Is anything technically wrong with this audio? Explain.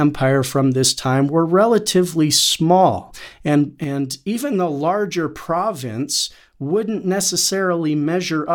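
Yes. From 3.84 s to the end, one channel drops out, likely because one stereo side was lost. In the mono sum, the speech common to both sides falls abruptly by about 6 dB. The waveform shows a sudden step down to roughly half amplitude, and the spectrogram dims uniformly.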